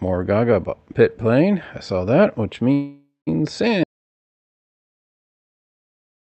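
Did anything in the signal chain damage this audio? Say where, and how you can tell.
Yes. Call audio freeze at 2.73 to 3.29 s: the sound smears into a fading buzz, then about 170 ms of quiet, and resumes where it stopped. This likely points to a starved network jitter buffer. Unlike a dropout, nothing is lost.

Audio dropout to silence from 3.84 s to the end: a hard cut into silence with no room tone, most likely from a lost input link or device, with the audio never returning.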